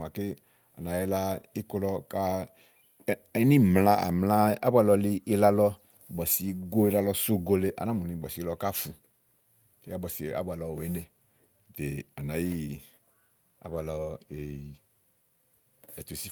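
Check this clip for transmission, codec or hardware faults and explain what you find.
No faults can be heard anywhere in this speech recording. There is nothing to point to at any moment in the audio.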